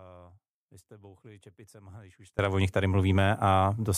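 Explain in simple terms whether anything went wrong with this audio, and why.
An audio dropout to a faint residue runs from the very start until 2.39 s, leaving only a faint sound. At "o nich tady" the speech snaps back abruptly, not easing in like a fade, likely because the signal was lost for a while.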